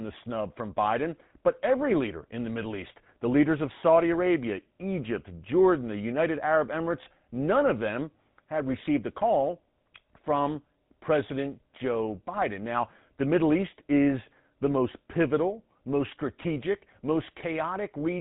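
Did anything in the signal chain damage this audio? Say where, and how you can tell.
Yes. The codec stage did it: GSM full-rate coding throughout the speech. The voice has a plainly audible buzzy, gravelly roughness and nothing above 4 kHz. The codec models the vocal tract and excites it with sparse regular pulses, which fits a 13 kbps rate.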